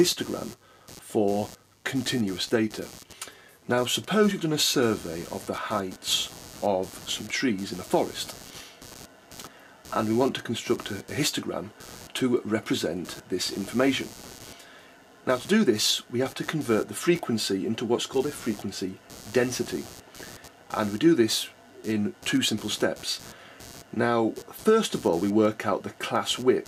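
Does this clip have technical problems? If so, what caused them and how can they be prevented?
Yes. Computer activity noise runs through the whole clip as a buzzing, scratchy layer pulsing at around 150 Hz, sitting roughly 20 dB below the main sound. It rises and falls independently of the audio content, because load changes in the processor, graphics card or mouse shift the ground shared with the audio circuit, and that moving ground reference gets added to the signal. Prevention: use an external USB or optically isolated audio interface, or fit a ground-loop isolator.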